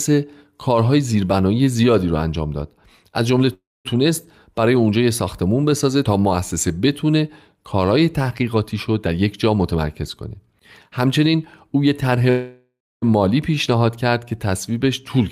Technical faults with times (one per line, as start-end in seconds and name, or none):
3.53-3.87 call audio freeze
9.06-12.11 jitter buffer speed-up
12.30-13.04 call audio freeze